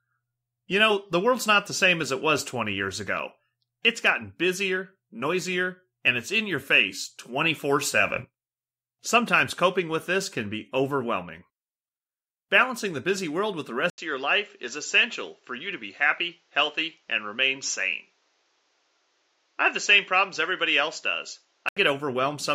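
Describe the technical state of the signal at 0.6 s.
At 0.6 s the signal is intact, with no dropout, distortion or other technical fault audible at that moment.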